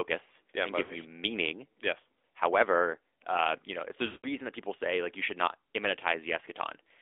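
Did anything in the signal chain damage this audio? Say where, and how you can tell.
Yes, two things, both on the mobile side. The whole clip has gone through the AMR narrowband mobile codec. The band sits between roughly 300 Hz and 3.6 kHz with nothing on top, and the speech has that buzzy, synthetic edge you get when a vocal-tract model plus a few pulses stands in for the real waveform. The damage is plainly audible, which fits one of the upper AMR-NB modes, around 10 kbps.

Then there are lost AMR speech frames, which is a network problem. Right after "yeah and", from about 0.84 to 0.95 s, there's a short dip and warble lasting about 60 ms. That fits a few 20 ms frames failing over the radio link while the decoder repeats its last pitch and filter settings at falling gain. The second one is longer, after "uh you know", from 4.06 to 4.28 s. It smears and fades over about 180 ms before "that people say like" comes back a bit rough.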